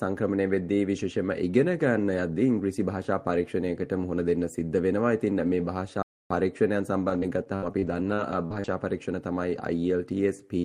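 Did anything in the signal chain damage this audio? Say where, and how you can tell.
Yes. At the playback stage, the sound drops out completely from 6.02 to 6.30 s, about 280 ms, leaving a flat waveform and a blank spectrogram column. A playback stall is the likely cause.

At the network stage, repeated packet loss between 7.05 and 8.70 s gives choppy, robotic sound. Gaps up to 67 ms are patched with repeated sound, seen as smeared, stuttering spectrogram bands.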